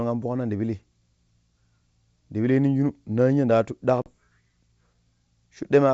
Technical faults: packet loss on an ADPCM call

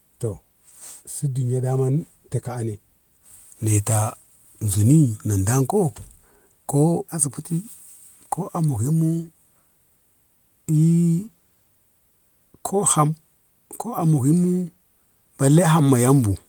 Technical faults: none

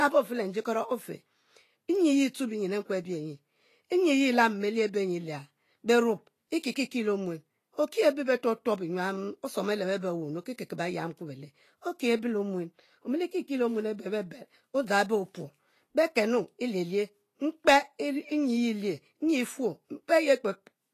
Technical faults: Vorbis compression

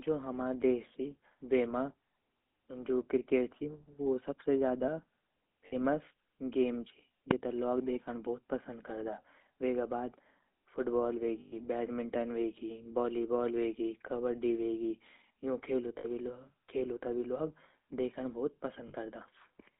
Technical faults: GSM full-rate codec; lost GSM frames; invalid numbers at full scale

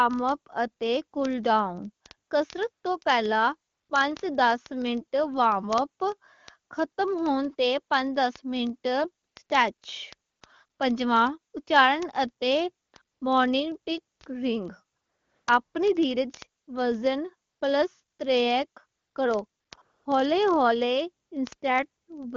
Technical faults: word clock ticks; AMR comfort noise

